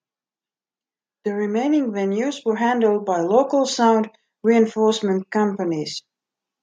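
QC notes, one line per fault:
2.42–3.86 s, automatic gain rising: right after "remaining venues" the AGC decides things are too quiet and ramps up about 5 dB, so voice and background swell together.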